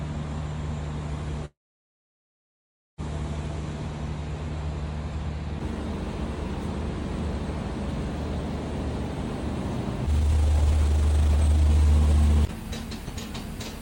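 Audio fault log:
1.45–3.00 s, call audio freeze: a brief buzz fades into roughly 1.4 s of silence, then the sound resumes where it stopped, likely from delayed packets draining the jitter buffer.
10.07–12.84 s, jitter buffer speed-up: the sound rushes at 154% speed with unchanged pitch as the receiver trims pitch-period slices, shedding about one and a half seconds of backlog.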